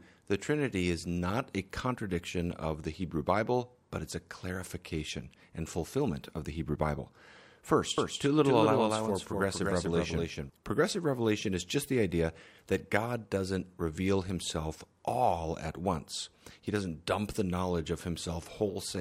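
From 7.98 to 10.50 s the speech carries a doubled audio track. A second, full-band copy trails about a fifth of a second behind at a few decibels quieter, likely from a slower capture path. It starts and stops abruptly, with no decay or room colour. On a waveform or spectrogram every syllable onset repeats, offset by that constant gap.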